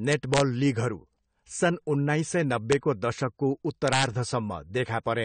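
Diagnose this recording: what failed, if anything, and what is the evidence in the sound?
Three speech peaks show integer overflow. This is a fault in sample-format conversion or a fixed-point gain stage. The first runs from 0.12 to 0.40 s, just before "लिगहरू सन् उन्नाइस". The second is a click at 2.72 s. The third runs from 3.88 to 4.04 s. Peaks pushed about 1 dB past the integer limit in the first two, and about 4 dB in the third. They wrap to the opposite sign instead of holding. Each overshoot becomes a crack sharper than clipping.

The codec stage shows plainly audible damage throughout. Nothing is heard above 9 kHz, so the top end is dull. Sibilants and held vowels sound smeared and fizzy. This is likely AAC compression, AAC-LC at a low rate near 32 kbps. At that rate the encoder lowers its cut-off. It quantises the frequency lines coarsely against its hearing model, so fine detail goes. 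That leaves the warbly texture.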